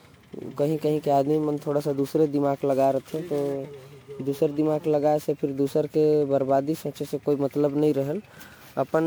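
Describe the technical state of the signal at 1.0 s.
At 1.0 s the speech carries generation loss, which runs through the whole clip. The likely cause is repeated MP3 encoding at 128 kbit/s, something like ten passes, each re-quantising on a shifted frame grid so noise and spectral holes pile up. It sounds swirly, hollow and smeared, with soft consonant attacks. A single low-bitrate encode would cut the top end, but content still reaches about 20.9 kHz here, so the damage comes from accumulation rather than a starved bitrate.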